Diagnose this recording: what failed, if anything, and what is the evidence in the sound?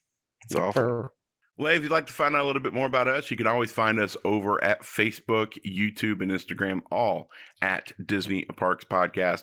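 Network, jitter buffer: a short stall from a late packet at 0.93–1.00 s holds the last sound for 51 ms with nothing lost. The spectrogram shows a flat, repeated harmonic smear.

Network, packet loss: short concealed packet loss at 1.04–1.09 s replaces 20 ms of missing audio with 24 ms of extrapolated sound, which appears as a brief blurred patch.

Codec bitrate: a call bitrate drop from 32 to 16 kbps, lasting 1.76–3.29 s, leaves the sound coarse and muffled. The spectrogram's upper band thins out for about one and a half seconds.

Jitter buffer playout: a jitter buffer speed-up at 6.64–7.13 s runs at 109% speed and trims about 50 ms of pitch periods. The waveform looks compressed in time with unchanged pitch.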